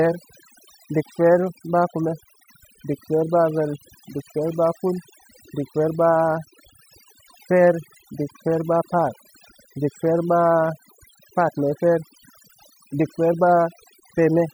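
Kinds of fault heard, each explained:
Overdone noise removal: across the whole speech clip, noise reduction pushed too hard drops individual frequency bands whenever they sit near its noise estimate, so pauses fall to near silence with twinkling specks. Unlike a low-pass filter, the treble isn't simply cut off.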